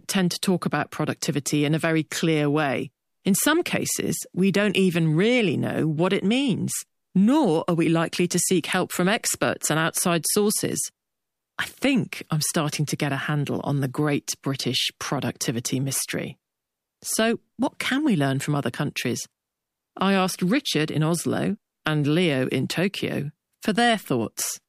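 Nothing stood out as a technical fault at any point in listening to the speech.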